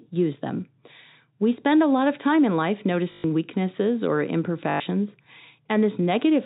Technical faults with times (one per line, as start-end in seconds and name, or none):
3.12-3.24 packet loss with last packet repeated
4.70-4.80 packet loss with last packet repeated